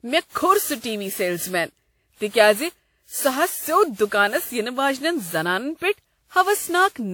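A speech recording with generation loss throughout. The sound is swirly and smeared. It has a hollow quality, and consonant attacks blur. That is worse than a 96 kbit/s lossy encode would give on its own. The bandwidth still reaches about 20.1 kHz, so this is not low-bitrate muffling. The likely cause is repeated decoding and re-encoding, around ten passes, with a codec that sounds like WMA version 1. Each pass requantises on a shifted frame grid, so the noise piles up.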